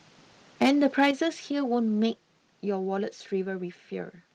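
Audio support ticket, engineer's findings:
Harsh crackle on loudest syllables, 0.61 to 1.08 s. Likely microphone overload: input gain too high, peaks driven about 4 dB past converter full scale and flattened, a small fraction of samples clipped, adding hard-edged distortion to the loud parts of the speech.

Abrupt level drops in voice and background together, at 1.11 s (about 7 dB) and 2.13 s (about 4 dB). Likely microphone volume stepped down by call software's input gain control, the first step right after the clipped passage, then a second cut.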